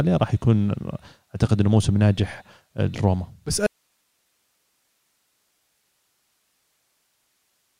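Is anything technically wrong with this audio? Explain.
Yes. From 3.67 s to the end, an audio dropout to a faint residue: the signal cuts abruptly to hiss roughly 50 dB down, likely a lost source while the path stayed live, unlike a fade.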